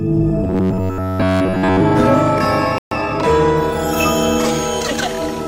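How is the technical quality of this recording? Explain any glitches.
The recording has three clear playback glitches packed into its first few seconds, so the technical quality is compromised.

From 0.44 to 1.80 s you get robotic sound from repeated short buffers. The audio collapses into a rigid, metallic buzz pitched at about 94 Hz, and essentially all of that stretch is repeated material rather than fresh signal. The likely cause is that new audio was arriving too slowly, so the player kept looping the last tiny chunk, roughly 10.7 ms long, which fits that 94 Hz drone.

At 2.78 s there's a playback stall. The sound just drops out mid-flow for about 131 ms, a noticeable hole, before picking back up at 2.91 s. That's likely the player running dry of data or having its thread blocked briefly, leaving the output silent until things recovered and audio resumed.

Right after, from 2.91 to 3.17 s, comes time-compressed catch-up. 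The player clears the backlog left by the stall by snipping out small pieces and cross-fading across the gaps, running at 1.5 times normal speed. Pitch stays where it should, but the passage sounds hurried.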